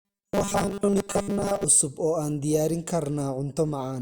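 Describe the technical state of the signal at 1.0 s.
At 1.0 s the signal is in robotic sound from repeated short buffers, from 0.01 to 1.64 s, just before "oo aan diyaarin". Audio is likely arriving too seldom, so roughly 5 ms stretches are looped over most of the span, imposing a rigid 200 Hz metallic buzz on the speech.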